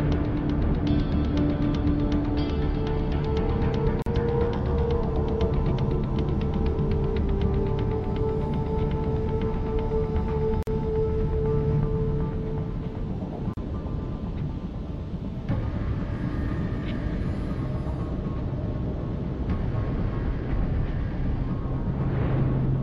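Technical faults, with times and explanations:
4.02 s, 10.63 s and 13.54 s, gap at a join of encoded pieces: silences of 42, 45 and 36 ms open in continuous sound where separately encoded pieces meet, carrying untrimmed start delay and end padding. Unlike a dropout, nothing is lost. The sound resumes exactly where it stopped, with smeared edges.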